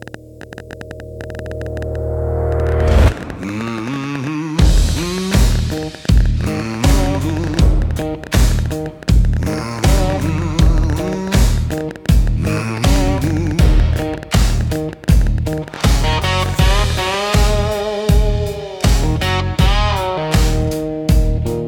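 From about 0.02 s right through to 17.15 s there's a train of clicks running over the sound, somewhere around two hundred of them, at roughly 11.6 per second but with uneven spacing, so it ticks and pops rather than buzzing steadily. They're all much the same shape and poke out a few dB above the signal, and they carry on through the pauses too. Likely cause is interference from nearby equipment or a faulty connection or power supply.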